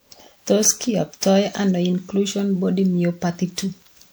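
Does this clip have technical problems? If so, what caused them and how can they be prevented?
Yes, generation loss runs through the whole speech clip: swirly, hollow smearing with blurred consonant attacks, likely from roughly ten successive MP3 re-encodes, each on a shifted frame grid, which fits 128 kbit/s MP3. A single encode wouldn't sound this degraded at that bitrate. Prevent it by editing from a lossless master and encoding only once.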